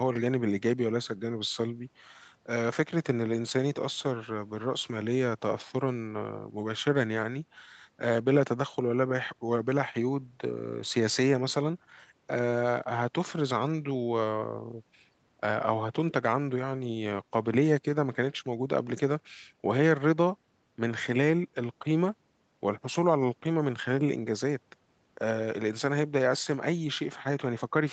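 No technical fault is audible in the speech, whose content stops at about 8 kHz, as expected from the call's microphone processing and the band limit of its Opus call codec.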